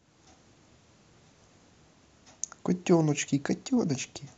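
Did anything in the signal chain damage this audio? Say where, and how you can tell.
Yes. DAB burbling damages this speech at the decoding stage, from 1.18 to 1.68 s and again from 3.95 to 4.18 s. Bit errors from weak reception, at a fraction of a percent, slipped past error correction into the MP2 data, so corrupted samples put short blips of noise into single sub-bands and corrupted scale factors make individual sub-bands leap in level for up to a frame. The result is a burbling disturbance over the sound. Packet loss would instead leave gaps, and low-bitrate coding would smear the sound steadily.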